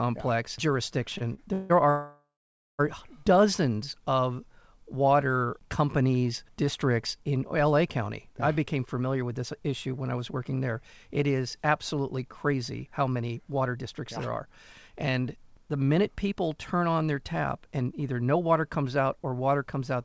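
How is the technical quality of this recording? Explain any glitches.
The recording has clear network glitches near the start and hurried passages later. It is band-limited, with nothing above 8 kHz, which fits a wideband call codec.

Short stall from a late packet: at 1.18 to 1.22 s and 1.34 to 1.39 s. A packet arrived late, so the receiver held the last sound for 25 and 29 ms. You hear a brief smear. Nothing is lost.

Call audio freeze: at 1.53 to 1.72 s, the sound is held for 163 ms as a fading buzz. At 1.90 to 2.81 s it is held for 891 ms, including 540 ms of silence. The likely cause is delayed packets emptying the jitter buffer. The audio then resumes where it stopped.

Jitter buffer speed-up: from 9.0 to 10.57 s, after "I became", and from 12.17 to 14.02 s, before "yeah there are", the speech runs about 8% fast. Each stretch loses roughly 150 ms. From 14.45 to 18.41 s, between "yeah there are" and "comes out or", it runs 9% fast and loses roughly 300 ms. 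The receiver trimmed tiny pitch-period slices to reduce excess buffered delay. The speech sounds rushed, but its pitch is unchanged.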